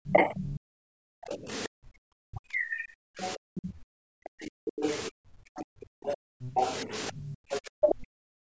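A speech recording carrying three kinds of echo-canceller fault, with the call microphone processing leaving nothing above 8 kHz. Background gated by the echo canceller runs from 0 to 1.99 s and again from 3.37 s to the end. The room sound is pulled down by about 40 dB for roughly a second and a half in the first stretch and about three seconds in the second, as the canceller clamps the microphone while its loudspeaker plays. On a spectrogram, the noise floor goes nearly black in blocks. On a waveform, the quiet baseline flattens. The other side's voice leaking through sits at 0.07 to 1.36 s about 15 dB under the talker, 3.21 to 3.72 s about 30 dB under, and 4.65 to 7.95 s about 20 dB under. This is likely loudspeaker echo that the canceller failed to remove. It shows as a fainter second set of harmonic traces under the main voice. Speech suppressed in double talk hits from 2.27 to 3.09 s and briefly at 4.72 to 4.76 s, with drops of roughly 40 dB. 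This likely happens because the canceller, facing both talkers at once, turned everything down. The waveform envelope caves in, and the spectrogram shows a sudden fade across the band.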